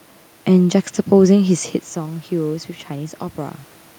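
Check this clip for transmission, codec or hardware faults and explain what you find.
One fault is present: automatic gain rising, from 1.93 s to 3.66 s. Around 1.5 s the talker moves away from the microphone, and the level reaching the input falls by about 13 dB. The automatic gain control reads this as a quiet source and slowly raises its gain by about 3 dB over nearly two seconds. Because the gain acts on the whole signal, the speech and the room noise behind it swell together.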